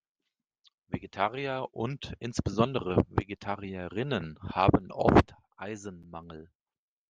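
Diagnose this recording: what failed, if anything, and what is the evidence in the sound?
Regular clicks sit in the speech every 1.43 s, about five of them between 0.50 and 6.23 s. These are clock drift buffer slips at the buffer stage. Two device clocks likely differ by roughly 150 ppm, so a few samples are dropped or repeated at each slip.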